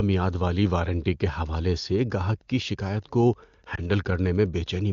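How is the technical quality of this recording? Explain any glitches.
The recording has two faults: a faint ticking interference through most of the recording and one brief concealed glitch, both heard over clear wideband phone audio.

Wi-Fi interference starts at 1.45 s, just after "میعاد والی وارنٹی کے", and continues to the end. A nearby Wi-Fi radio's beacon, repeating every 102.4 ms, is being rectified by the audio circuit. This produces a steady tick about ten times a second, roughly 40 dB below the speech. That regular ten-per-second rhythm distinguishes it from a continuous mobile-phone buzz.

Lost AMR speech frames occur from 3.75 to 3.90 s, where a single 20 ms frame failed its check. The decoder covered the gap by repeating the previous frame's pitch and vocal-tract settings at reduced gain, which produces a short dip or warble. Because the gap was concealed, there is no hard silent cut or click, which sets it apart from a plain dropout.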